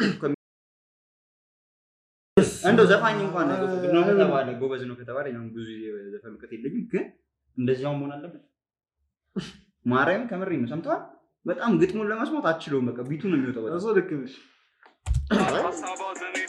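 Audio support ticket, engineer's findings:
Audio dropout to silence, 0.34 s to 2.37 s. Sound cuts off abruptly. 2.03 s of silence, no room tone, then resumes mid-flow. Likely input lost upstream (device disconnect, failed link or mute) while the recorder kept writing silence. Gap content unrecoverable.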